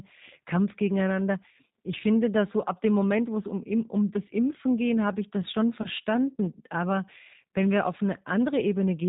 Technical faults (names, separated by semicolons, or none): G.729 codec; VoIP packet loss concealed by the speech codec